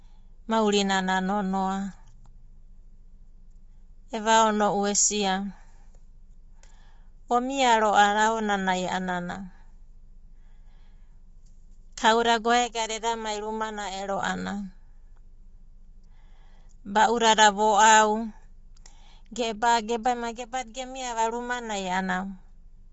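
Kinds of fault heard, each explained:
Low-delay AAC compression: the speech has a plainly audible coded roughness throughout, with a grainy fill between the voice's harmonics and nothing above about 7.7 kHz, so the top end sounds cut away. That's the likely signature of AAC-ELD, the low-delay codec used in video calls. Its very short frames can't separate pitch harmonics cleanly and spend bits fast, and the damage here fits a low rate of around 24 kbps.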